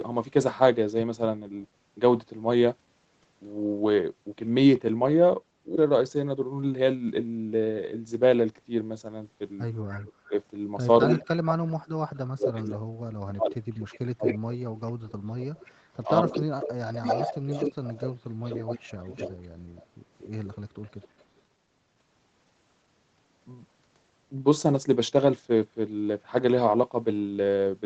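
At 5.75 to 5.86 s the speech skips ahead. Roughly 0.7 s of audio is missing, dropped in transit or by an overflowing jitter buffer, and the two sides are butted together with no gap. A waveform shows an abrupt splice where the syllable shapes don't line up.

From 6.35 to 6.81 s comes a jitter buffer speed-up. The receiver held too much audio and trimmed short pitch-period pieces, about 50 ms in all, so the speech plays at 111% speed while the pitch stays put and sounds hurried. On a spectrogram the harmonics stay level while the syllables look compressed in time.

An echo leak appears at 9.90 to 10.29 s: a copy of the speech returns 237 ms later at about 20 dB below it. The cause is likely a loudspeaker on the far end whose echo canceller let part of the signal through. A spectrogram shows a faint, time-shifted duplicate of the same harmonic pattern.

Right after, at 10.28 to 10.34 s, the speech is suppressed in double talk, dipping by about 10 dB as the canceller likely turns down both the echo and the talker. 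The envelope sags briefly.

At 11.06 to 11.22 s a second echo at 239 ms arrives about as loud as the speech itself. A deeper double-talk suppression follows from 11.22 to 14.26 s, with around 1.5 s of speech cut in pieces by up to about 40 dB. The waveform shows gaps and chopped segments, and the spectrogram loses its upper bands in places.

A long echo leak from 12.15 to 21.24 s trails the speech by 247 ms at about 10 dB down and is heard as a ghostly doubling. Within it, at 18.97 to 19.13 s, the speech dips by about 15 dB in another brief suppression.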